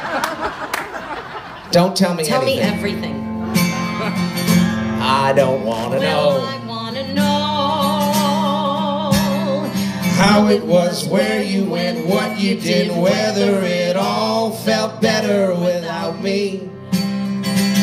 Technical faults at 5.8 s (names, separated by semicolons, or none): loose connector crackle